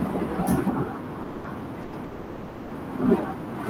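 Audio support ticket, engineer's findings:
Call audio freeze, three instances: 1.22–1.45 s, 1.83–1.94 s, 2.04–2.72 s. Last speech sound stretched into a fading buzz for 220, 100 and 670 ms, never reaching silence. Speech resumes exactly where it stopped, nothing dropped, each resumption later by the hold length. Likely cause: packets delayed in transit, receiver's jitter buffer running empty. Concealment extends the final sound until arrival, inserting a gap rather than losing audio.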